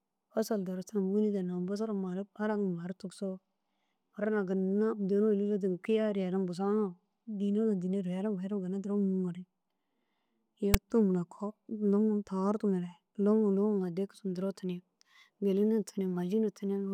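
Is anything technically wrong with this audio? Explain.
Yes. At 10.74 s, file tags are played as audio: a brief block of text metadata decoded as samples, producing a loud, one-sided rasp with abrupt edges.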